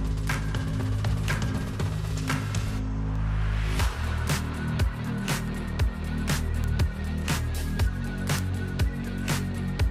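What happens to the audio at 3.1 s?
A sharp tick falls around 3.1 s, one of a steady series about every half second from 0.25 to 9.55 s: word clock ticks, from a digital link read on an unlocked clock that drops or repeats single samples.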